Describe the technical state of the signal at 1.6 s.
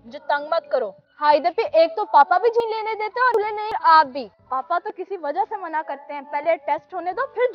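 Around 1.6 s the signal is intact, with no dropout, clipping, glitch or other fault at that point.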